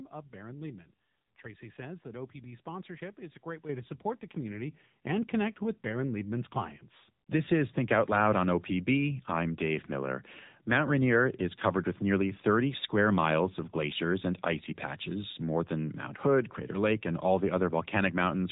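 Throughout, the speech has passed through the AMR narrowband mobile codec, which rebuilds the voice from a coarse vocal-tract model at a low bit rate. Nothing above 3.8 kHz survives, and the voice sounds plainly buzzy and synthetic, which fits one of the lower modes around 8 kbps.

At 3.69 s, 4.71 s and 6.75 s, the microphone volume was stepped up as the input gain was raised in single jumps of about 7 dB, 3 dB and 2 dB. Voice and background leap louder together at each point.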